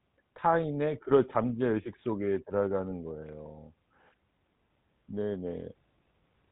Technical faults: GSM full-rate codec

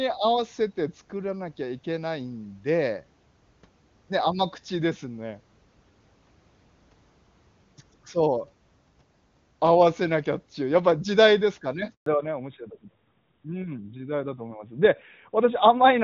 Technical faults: handover gap; fallback to narrowband

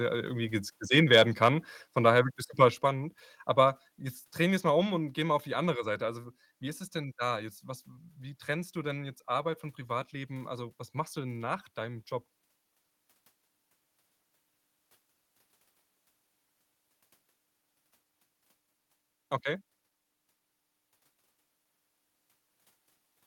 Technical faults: microphone overload; microphone volume stepped down

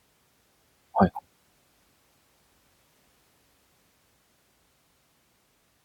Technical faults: overlapping chunks

